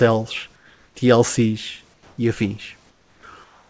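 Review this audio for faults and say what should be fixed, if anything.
Comfort noise in place of the background appears in four pauses: 0.56 to 0.95 s, 1.94 to 2.18 s, 2.90 to 3.23 s, and 3.44 s to the end. The room background, about 40 dB below the speech, gives way to a flat, featureless hiss. It drops by about 4, 3, 7 and 3 dB respectively. The likely cause is discontinuous transmission, where synthetic noise fills gaps the sender stopped coding. The audio has nothing above 8 kHz, which fits a G.722 call path. To prevent it, disable discontinuous transmission on the sending side.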